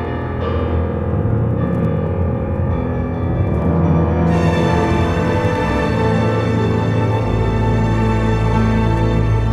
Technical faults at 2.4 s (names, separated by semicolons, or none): none